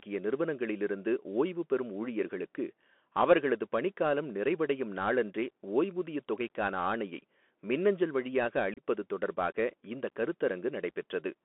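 This speech clip runs through a Bluetooth CVSD headset codec the whole way. The sound is confined to about 250 Hz to 3.4 kHz, which fits a 64 kbps CVSD link. The codec's one-bit up-or-down steps cannot keep pace with fast, loud high content, so s sounds come out scratchy and a grainy hiss sits under the speech. There is also unconcealed Bluetooth headset packet loss between 8.74 and 8.82 s. A few short packets went missing, about 30 ms in all. Their gaps were left empty, so the speech breaks up there, with abrupt edges and a brief dip in level as it returns.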